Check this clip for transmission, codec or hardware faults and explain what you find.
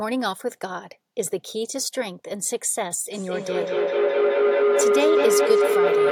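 Feedback howl, from 3.12 s to the end. A microphone and loudspeaker in one room feed each other with gain above unity on each pass, so the sound narrows to a tone near 400 Hz, pulsing about every fifth of a second and peaking about 6 dB over the speech.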